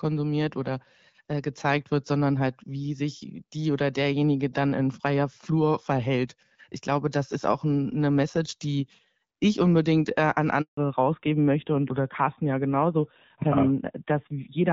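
Right after "ich unbedingt äh an", at 10.61 s, there's a handover gap: the call gets passed from one network to another and no speech frames make it through during the switch. The sound fades out within a few tens of milliseconds and stays silent for about 160 ms, until 10.77 s when the new link picks up. Whatever was said in that stretch is simply gone, so you hear a clean little hole.

From 10.77 s to the end, there's a fallback to narrowband. Before the gap, the wideband HD Voice codec carries the speech with only light coding damage, and that airy top end is audible. Once the new link comes up, everything above 4 kHz is cut off, which points to the call dropping from AMR-WB at around 12.65 kbit/s to AMR-NB at a lower rate, possibly 7.4 kbit/s. The speech turns duller and rougher, like an old-school phone line.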